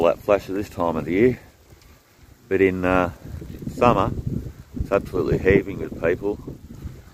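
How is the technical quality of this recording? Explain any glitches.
No technical faults are audible.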